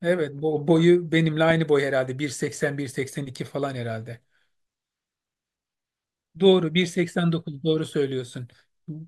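Speech recording, with no audible technical faults anywhere.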